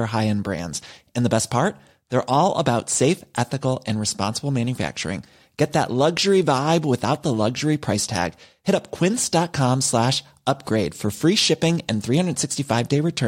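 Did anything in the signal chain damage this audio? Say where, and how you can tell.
Yes. An electrical switching spike lands on the speech at 7.15 s. It is a single sharp snap, peaking around -25 dBFS. It sits on top of the sound without disturbing it. The likely cause is a nearby switch or discharge arcing into the analogue wiring.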